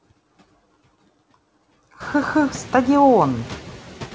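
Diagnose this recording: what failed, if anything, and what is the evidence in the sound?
Noise sinks between phrases and rises under the speech throughout: noise suppressor artifacts in call processing, which lower bands judged steady noise by about 14 dB.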